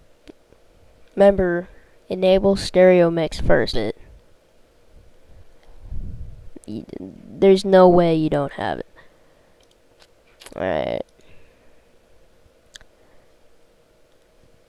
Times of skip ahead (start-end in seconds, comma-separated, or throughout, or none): 3.73-3.75